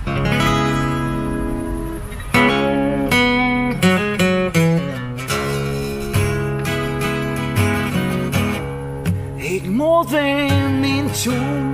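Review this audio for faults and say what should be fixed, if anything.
No faults; nothing needs fixing.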